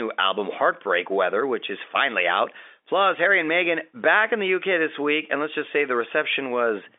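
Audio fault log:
No faults are present; the speech sits in the 300 Hz to 3.6 kHz band of G.711 telephone coding, with nothing above 3.8 kHz, as expected of a 64 kbps mu-law line.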